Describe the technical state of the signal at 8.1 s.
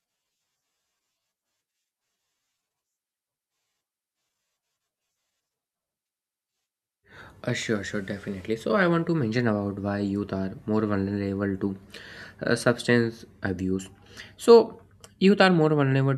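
At 8.1 s the speech signal is intact, with no dropout, clipping, glitch or other fault.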